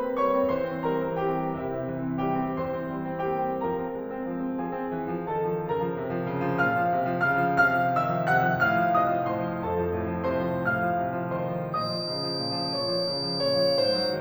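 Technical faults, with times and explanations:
11.71 to 14.2 s, feedback whistle: a thin 4.7 kHz tone that slowly swells and fades a few dB under the music, likely a speaker-to-mic loop sitting right at feedback.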